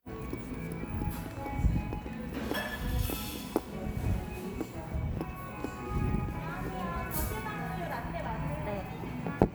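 No technical faults are audible.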